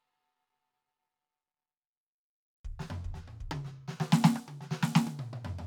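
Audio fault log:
No faults can be heard in this music clip. There is nothing here to log.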